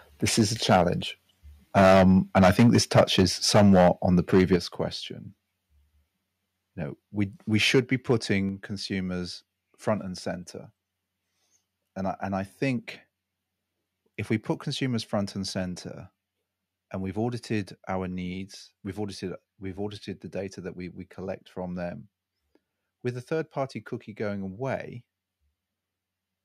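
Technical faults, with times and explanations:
0.39–0.42 s, 0.69–0.83 s, 1.77–3.26 s, 3.54–3.89 s, 4.33–4.56 s, 7.74–7.80 s and 8.10–8.32 s, microphone overload: the loudest passages turn harsh and crackly, worst across 1.77–3.26 s, where peaks run about 14 dB past full scale. Elsewhere the excess is about 2 to 11 dB. In the worst stretch roughly a tenth of samples are flattened. The likely cause is input gain set too high, so waveform tops are sheared off at the converter's limit, adding the gritty edge.
0.41 s, 3.57 s, 4.56 s, 8.49 s and 15.63 s, microphone volume stepped down: at each point the whole signal, voice and background alike, drops abruptly in one step, by about 2 dB at most points, about 3 dB at 8.49 s, and a more noticeable 8 dB at 4.56 s. Each of the first four follows or overlaps a distorted peak. This likely comes from the call software sensing overload and cutting the device's input volume in a single jump rather than a smooth fade.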